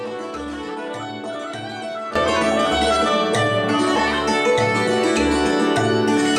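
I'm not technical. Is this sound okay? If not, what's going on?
No. At 2.16 seconds there is a sudden gain jump: the whole recording abruptly gets much louder and stays that way to the end. The background noise rises at exactly the same instant, unlike a sound that simply gets louder itself, so a volume setting was likely switched without any smoothing.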